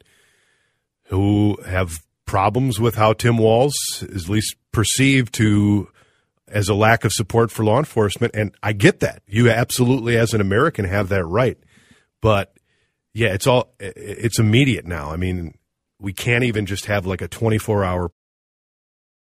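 Speech with no technical faults.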